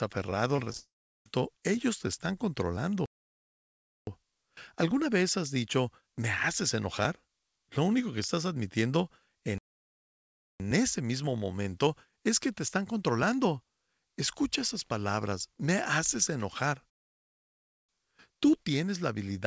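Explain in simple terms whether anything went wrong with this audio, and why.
Right at the start, from 0.56 to 0.77 s, there's repeated packet loss, the robotic sound kind. Five tiny holes, the longest about 18 ms, get patched by stretching the previous sound, so about a quarter of that bit comes out choppy.

Straight after, from 0.78 to 1.26 s, a long network dropout likely takes out nearly half a second. You hear a brief smeared continuation, then mostly silence. The speech picks up again at "ellos te están", with the missing piece simply gone.

Then there are three playback stalls, where the sound just freezes into silence for about a second and carries on. That's likely the player running dry or getting blocked. They hit at 3.06 to 4.07 s, at 9.58 to 10.60 s (after "único que estás admitiendo", resuming with "ese mismo momento es"), and at 16.90 to 17.89 s, after "palabras me haces enojar". 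The audio came over a call connection that keeps nothing above 8 kHz, so it sounds a bit narrower than full-range.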